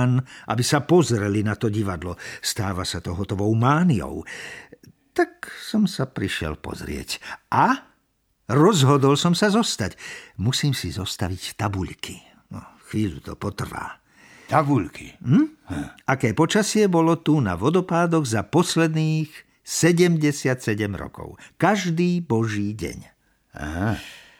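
No technical faults can be heard at any point in the speech recording.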